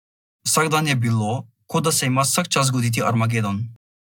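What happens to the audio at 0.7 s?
Nothing goes wrong at 0.7 s; the speech carries on intact through that moment with no dropout, click or distortion.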